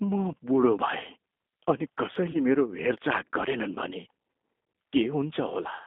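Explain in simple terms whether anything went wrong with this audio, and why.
Two things went wrong. The first affects the whole recording: it passed through the G.729 codec, a phone-call compression scheme that rebuilds speech from a rough model of the vocal tract instead of storing the actual sound. Everything is squeezed into a narrow telephone band of roughly 250 Hz to 3.6 kHz, so the speech sounds thin and boxy. The rebuilding process also leaves it plainly rough and slightly synthetic throughout.

The second is a brief glitch from VoIP packet loss concealed by the speech codec, between 2.31 and 2.40 s. About 30 ms of audio, which points to a single lost packet, never arrived. The decoder filled the gap by guessing, stretching out the last sound it had while fading it down. Because each new stretch of audio builds on the previous one, the speech stays weak or smeared for a short while after the gap, which is why the disturbance lasts longer than the missing audio.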